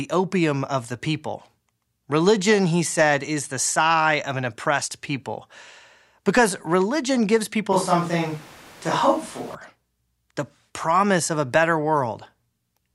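From 7.73 to 9.55 s the speech abruptly turns roomy and hollow, thinner in the bass, with room noise rising to roughly 25 dB below the voice, then snaps back. This is likely a switch to a distant microphone; unlike a low-cut filter, the added room sound and noise mark it.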